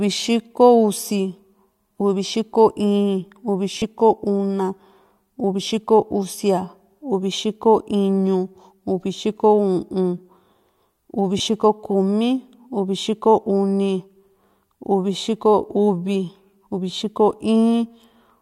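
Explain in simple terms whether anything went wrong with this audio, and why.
A few things did go wrong, all the same kind: lost LE Audio frames. At 3.76 s the speech briefly turns into a hissy, smeared blur for about 80 ms, with around 60 ms of it actually missing and the longest gap roughly 40 ms. Shorter 20 ms blips follow at 5.65 s and 11.38 s. The Bluetooth link dropped chunks, and the decoder filled each gap by replaying the last bit of sound with scrambled detail, hence the mushy noise.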